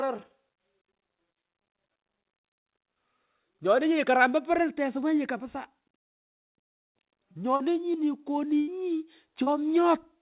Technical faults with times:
7.56-7.62 short concealed packet loss
8.60-8.69 burst of packet loss
9.43-9.48 short concealed packet loss

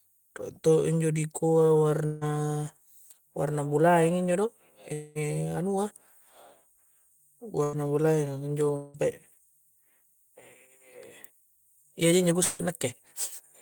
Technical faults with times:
2.05-2.24 long network dropout
2.24-2.49 jitter buffer speed-up
4.93-5.20 long network dropout
5.77-6.21 jitter buffer speed-up
7.63-7.85 burst of packet loss
8.76-8.97 long network dropout
11.76-12.13 jitter buffer speed-up
12.43-12.64 long network dropout

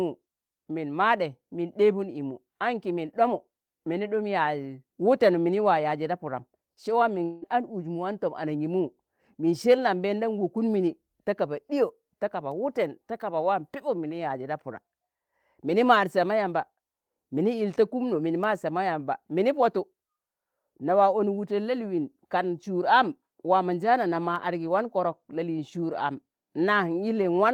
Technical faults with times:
7.23-7.44 long network dropout

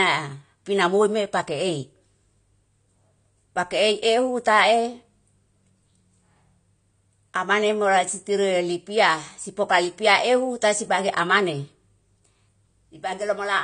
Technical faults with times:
0.00-13.63 AAC compression

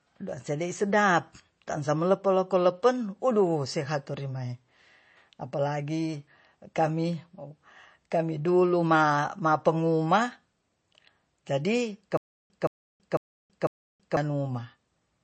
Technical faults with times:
0.00-15.23 MP3 compression
12.17-14.17 stutter with silent gaps

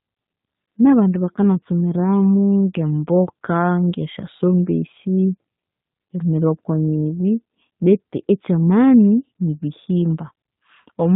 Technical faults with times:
0.00-11.15 G.729 codec

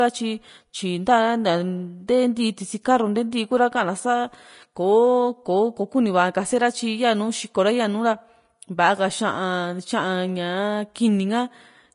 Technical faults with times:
0.00-11.94 Vorbis compression

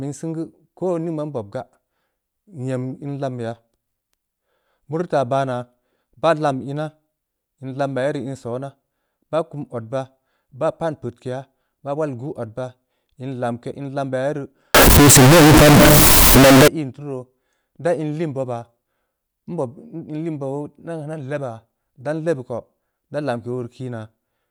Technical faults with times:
14.74-16.68 float read as integer

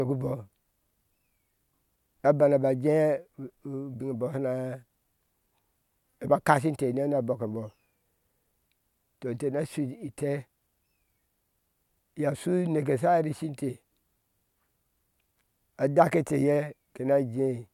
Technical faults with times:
none

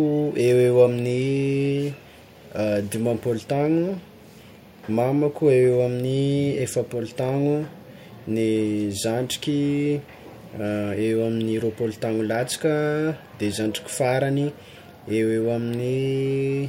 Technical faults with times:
none

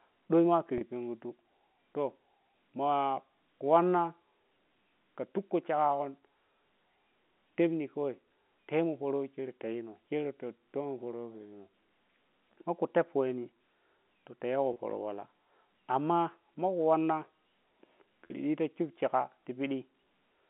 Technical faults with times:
0.78-0.81 packet loss with pitch repetition
14.73-14.76 packet loss with pitch repetition
18.27-18.30 packet loss with pitch repetition

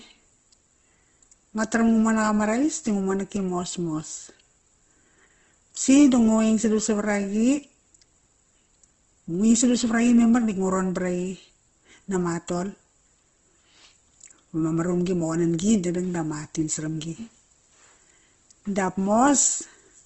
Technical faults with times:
0.00-20.05 Opus compression

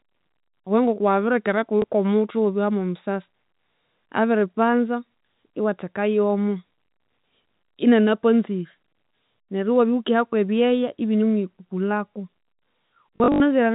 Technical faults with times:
1.82-1.84 packet loss with last packet repeated
13.16-13.40 packet loss with last packet repeated

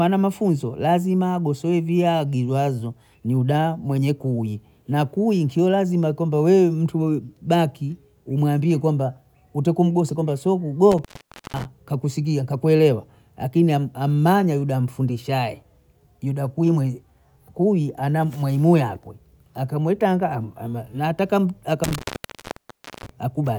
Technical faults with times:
10.91-11.65 intermittent contact
21.84-23.09 intermittent contact

